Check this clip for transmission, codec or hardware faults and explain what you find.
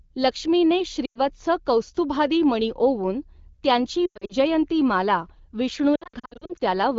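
Three bursts of lost AMR speech frames interrupt the wideband call audio, which at 12.65 kbit/s otherwise carries speech clearly.

Lost AMR speech frames: at 1.05 s (100 ms), 4.06 to 4.33 s (losses scattered over 240 ms) and 5.96 to 6.62 s (scattered over 640 ms), radio errors corrupted frames. The decoder repeated the last good pitch and vocal-tract settings at falling gain, so speech dips, warbles and briefly fades before returning weak or rough for a moment.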